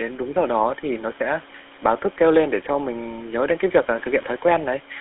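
Throughout, the speech carries GSM full-rate codec damage. Pulse-driven vocal-tract modelling makes it buzzy and gravelly. The band runs 250 Hz to 3.5 kHz, fitting roughly 13 kbps, with room noise about 26 dB below the speech.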